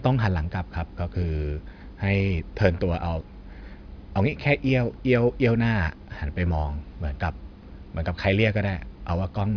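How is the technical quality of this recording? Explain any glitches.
The speech has a persistent fault throughout. Aliasing: sibilants sound gritty and metallic, with false tones folded down from above a ceiling near 5.5 kHz, which fits a drop to about 11 kHz without filtering. The folded tones sit roughly 30 dB below the speech.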